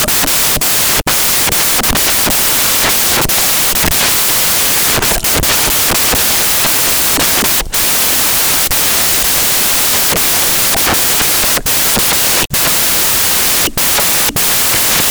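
Samples built from the wrong bytes affect this speech clip from start to finish. Each sample has been assembled with its bytes mismatched, whether shifted by one, reversed in order, or read at the wrong alignment. The rapidly fluctuating low-order bits therefore land in the most significant position, and the result is loud, harsh broadband noise across the whole recording, close to white on the louder passages.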